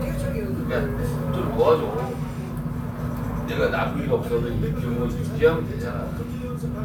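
No technical faults are audible anywhere in this recording of sounds.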